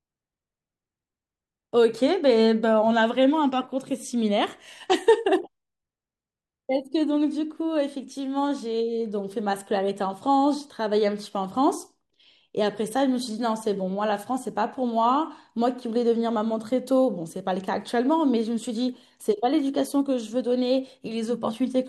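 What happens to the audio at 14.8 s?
At 14.8 s the speech carries a steady tick pattern from a resampler restarted on every block, a fault that runs through the whole clip rather than starting there. Each 40 ms block was rate-converted on its own, which fits a 44.1 to 48 kHz conversion, so every block edge gets a small error and the ticks repeat at 25 Hz. Unlike mains hum or an interference buzz, the pattern disappears in pauses and rides only on the signal.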